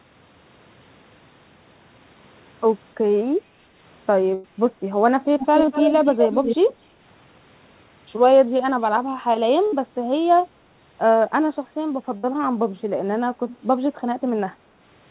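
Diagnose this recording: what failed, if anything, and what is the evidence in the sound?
The last sound held and fading out at 4.34–4.46, 9.66–9.74 and 12.17–12.25 s, with speech jumping ahead after each: network burst packet loss, 60–100 ms missing and concealed.

A delayed copy of the speech, 241 ms late, near full level at 5.39–6.56 s and about 20 dB down at 13.49–13.57 s: call processing, likely an echo leak past the echo canceller.

Brief smears at 5.66–5.69, 8.69–8.84 and 11.46–11.49 s: network short concealed packet loss, 20 ms gaps filled by extending the preceding sound.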